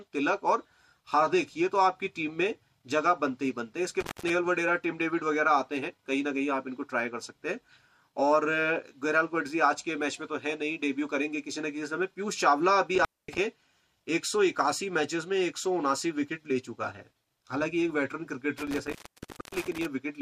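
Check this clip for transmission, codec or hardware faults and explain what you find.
A hardware fault runs through the clip: an intermittent contact cuts the signal three times. This is at 4.00–4.30 s (open for about 168 ms), 12.95–13.38 s (about 236 ms) and 18.58–19.86 s (about 598 ms). A loose plug or cable conductor briefly loses contact, so the sound drops out. Crackle marks each break and reconnection as the contact scrapes. Faint hiss fills each gap, and the last dropout is the longest.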